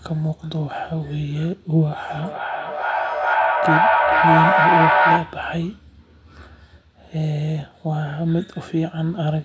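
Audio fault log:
2.23–5.58 s, feedback echo between two devices: each bit of speech comes back roughly every 400 ms as a second device on the call replays what the other mic sent, and that mic grabs it again. The loop's loud enough that repeats stack up, peaking about 5 dB above the speech.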